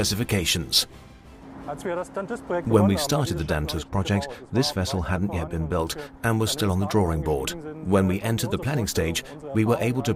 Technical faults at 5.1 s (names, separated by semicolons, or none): de-emphasis applied wrongly